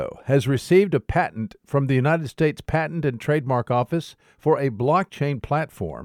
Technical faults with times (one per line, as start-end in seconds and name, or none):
none